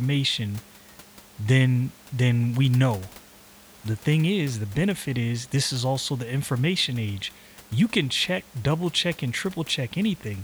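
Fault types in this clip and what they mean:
No fault types occur in this clip.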